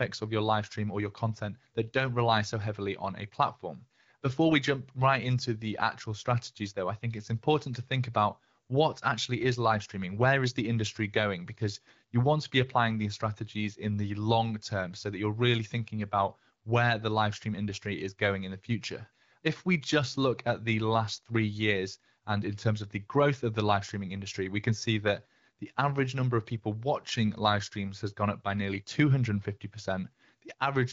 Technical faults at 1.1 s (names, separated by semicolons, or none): none